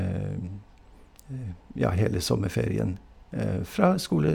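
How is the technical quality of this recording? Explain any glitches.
No glitches to report: the speech recording has no audible technical faults anywhere.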